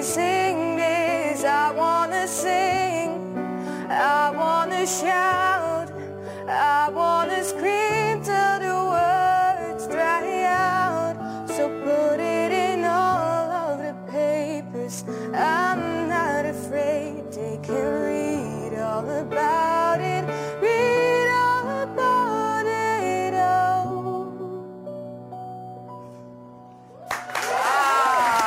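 Crude rate conversion runs throughout. Samples were repeated instead of filtered, which fits a step from 44.1 kHz to 48 kHz. The error, roughly 25 dB below the sound, adds a gritty, inharmonic fizz under loud, high passages. A spectrogram shows stray lines unrelated to the harmonics, and the waveform shows small stair-steps.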